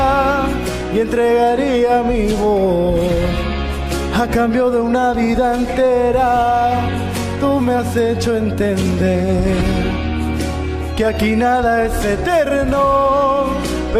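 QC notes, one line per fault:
No faults heard anywhere in the audio.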